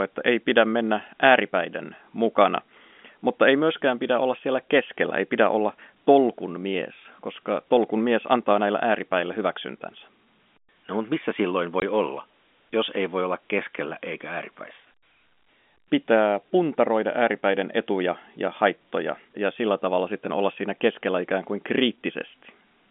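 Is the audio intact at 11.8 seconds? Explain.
No. Packet loss filled with silence cuts a 20 ms gap from 11.80 to 11.82 s, between "mutta missä silloin" and "olla jos ei voi". Lost packets, likely two short ones, became silence with hard edges.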